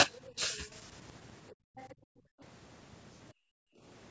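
From 0.70 to 0.79 s a faint second voice, about 35 dB below the speech, sits under the talker. It is likely the other side's voice leaking through from an incompletely cancelled loudspeaker, visible as a weak extra harmonic trace. At 1.53 to 1.76 s the background is gated by the echo canceller: room noise drops by about 40 dB, leaving a near-empty gap on the spectrogram and a flat waveform floor. The likely leak returns louder at 1.76 to 1.95 s, about 25 dB down. Further gating follows at 1.95 to 2.41 s and 3.33 to 3.82 s, each roughly half a second of sudden silence between rises in the noise floor, all beneath the call processing's 8 kHz ceiling.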